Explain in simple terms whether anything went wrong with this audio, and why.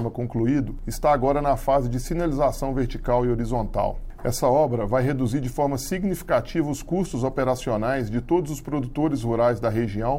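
Mains hum runs from 6.29 to 8.89 s. It is a steady, quiet 60 Hz buzz, likely from a ground loop picking up the power line.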